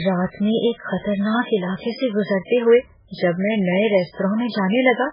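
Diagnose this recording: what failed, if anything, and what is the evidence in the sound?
Codec stage: throughout, the speech is heavily damaged by what is likely MP3 compression at a very low bitrate, around 8 kbps. Nothing sounds above 5.2 kHz, and watery swirling sets it apart from a plain low-pass filter.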